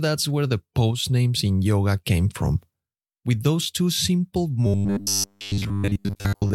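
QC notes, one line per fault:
4.67–6.54 s, robotic sound from repeated short buffers: after "those two simple", new audio likely arrives too seldom, so playback loops one 10 ms slice while most of the real sound is skipped. The loops impose a rigid, metallic 100 Hz buzz that only loosely follows the speech.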